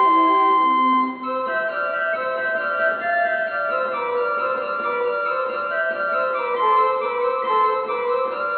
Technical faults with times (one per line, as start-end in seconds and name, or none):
none